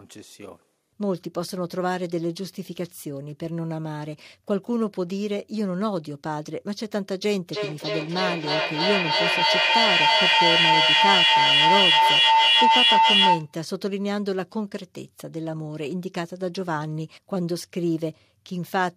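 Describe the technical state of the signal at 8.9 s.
At 8.9 s the signal is caught in a feedback howl running from 7.5 to 13.57 s. A microphone is picking up a loudspeaker carrying the same call, and each pass round that loop comes back louder, collapsing onto a tone around 1 kHz that comes round the loop roughly every third of a second and peaks about 8 dB above the speech. Unlike ordinary echo, whose repeats die away, these repeats grow and sharpen into a single pitch until the loop is broken.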